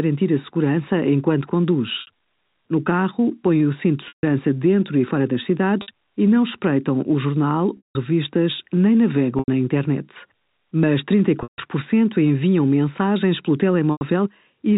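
Brief buzzy holds, some fading toward silence before the sound resumes, come from packet loss with pitch repetition at 2.01 s (after "a segurança enquanto", 60 ms), 4.08 s (between "põem o cinto de" and "dentro e fora das", 150 ms), 5.82 s (60 ms), 7.77 s (after "não espreitam o jornal", 180 ms), 9.39 s (90 ms), 11.43 s (150 ms) and 13.92 s (90 ms). The receiver repeated the last pitch period to cover each missing stretch and faded it out on the longer gaps, over the clip's telephone-band G.711 coding.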